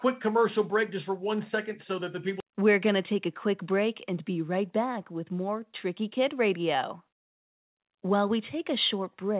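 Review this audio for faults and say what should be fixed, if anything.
Nothing here needs fixing: the speech has passed through a WebRTC call path with G.711 mu-law coding at 64 kbps, which limits the band to nothing above 4 kHz and adds its ordinary coding noise.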